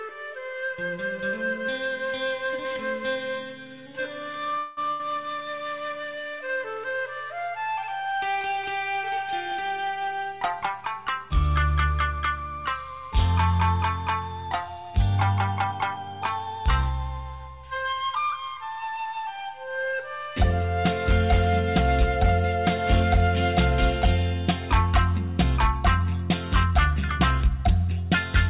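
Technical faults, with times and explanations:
4.58 to 4.80 s, call audio freeze: The sound stalls and the last moment is held and fades for about 189 ms. It then resumes where it stopped, with nothing lost. Packets were likely held up in transit, so the jitter buffer ran dry.
4.92 to 5.01 s, burst of packet loss: A brief held, fading sound of about 76 ms replaces a stretch of audio. The sound then picks up about 80 ms further on. A short run of packets was lost, so the receiver stretched the last sound and skipped the missing part.
15.17 to 16.47 s, jitter buffer speed-up: The sound runs about 9% fast at an unchanged pitch and feels hurried. The buffer had built up extra delay, so the receiver cut many tiny pitch-length slices, about a tenth of a second in total, to catch up.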